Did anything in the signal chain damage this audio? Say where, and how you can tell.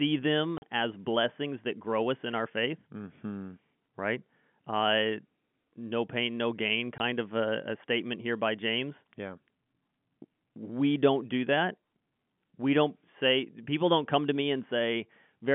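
Yes, at the network stage: hard-edged silent holes at 0.58–0.62 s, just before "as blessings that grow", and 6.98–7.00 s, after "no pain no gain". These are packet loss filled with silence, with gaps fitting lost 20 ms packets.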